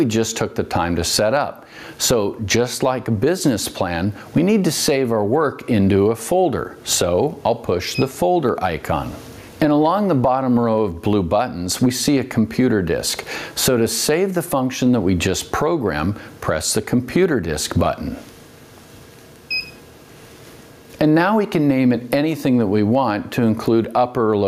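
Gain pumping runs throughout the clip, a swing of around 20 dB. The likely cause is input gain set far too high, with a fast limiter clamping down on peaks, squashing loud and soft passages together.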